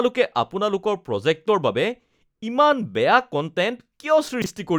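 Right near the end, from 4.42 to 4.46 s, there's a chunks-out-of-order fault: one 20 ms slice of the speech got delivered a chunk late and plays after the piece that should follow it. Nothing's missing, but the swap leaves a quick jumbled blip.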